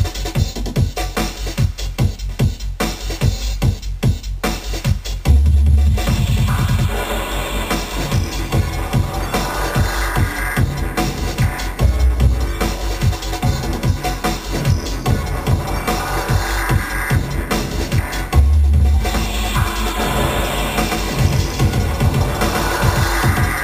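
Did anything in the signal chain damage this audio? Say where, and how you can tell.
Yes. From 19.99 s to the end there is a doubled audio track: a full-band copy about as loud as the original, roughly 150 ms behind and starting abruptly. The waveform shows twinned transients and the spectrogram shows each onset stamped twice. A second, slower capture path or misaligned edit is the likely cause.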